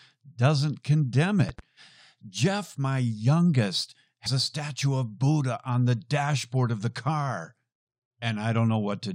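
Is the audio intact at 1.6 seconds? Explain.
No. From 1.49 to 1.61 s a loud pop occurs, most likely a sudden voltage pulse from a plug, switch, static or driver glitch entering the signal path. It is heard as two sharp pops in quick succession, peaking about 5 dB above the speech, which carries on underneath.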